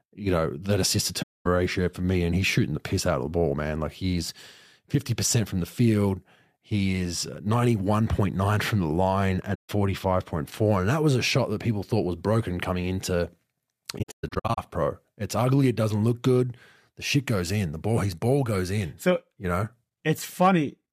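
It's a speech recording with two problems. The main one is AAC frame loss with muting, where the decoder dropped frames and filled the gaps with silence. Overlapping windows fade each hole in and out, so you hear soft-edged dropouts. The first runs from 1.22 to 1.47 s, about 235 ms, between "know that assist to" and "ratio for me". The second, about 150 ms from 9.54 to 9.70 s, comes right after "from the line". The third, from 13.98 to 14.58 s, is a patchy stretch of about 405 ms of missing sound scattered over roughly 600 ms, with the longest single gap around 150 ms. The gap lengths fit frames of about 21 ms, as with 1024-sample AAC frames at 48 kHz. Separately, there's hard clipping from 20.42 to 20.49 s. A peak about 3 dB past full scale got its tops cut flat, and that adds high harmonics you hear as a brief crackle on the loud moment.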